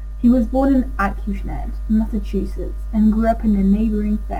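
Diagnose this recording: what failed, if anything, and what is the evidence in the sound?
Crude rate conversion at the sample-format stage: the speech was taken from 48 kHz to 44.1 kHz by keeping the nearest sample, with no filtering. The resulting timing errors add a faint, gritty, inharmonic fizz, roughly 40 dB down, tracking loud and bright syllables throughout.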